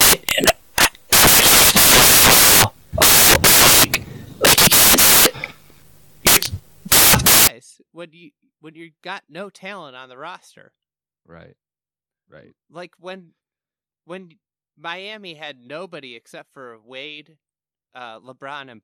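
From the start to 7.47 s, the samples are built from the wrong bytes. The reader misjoins each sample's bytes, so the fast-changing low bits become the large part of each value. Loud, harsh broadband noise results. Clean speech returns at "when you when you".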